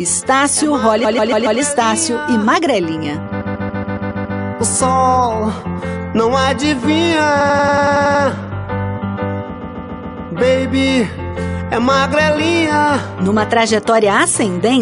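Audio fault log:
1.03–1.59 s, 3.40–4.38 s, 7.40–8.23 s, 9.60–10.30 s: repeated frames. A short block of compressed frames was delivered again and again, so the decoder replayed it each time. A 139.3 ms block loops four, seven and five extra times in the first, second and fourth runs, and a 92.9 ms block loops nine extra times in the third, which fits runs of six and four frames. Each run sounds like a rhythmic stutter, and together they stretch the audio by about 3.1 seconds.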